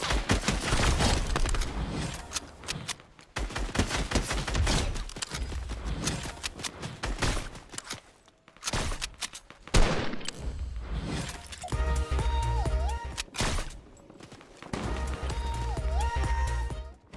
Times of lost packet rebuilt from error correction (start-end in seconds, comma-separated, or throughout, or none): none